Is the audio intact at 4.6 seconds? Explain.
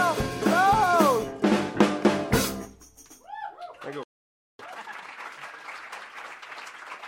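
No. At 4.6 s the music is in a time-compressed catch-up, from 4.59 to 5.13 s. The player is removing and cross-fading small slices to clear its backlog. The music rushes at double speed, keeping its pitch. This follows a playback stall from 4.03 to 4.59 s, about 0.56 s of silence in mid-flow. The likely cause is that the player ran short of data or its thread was blocked.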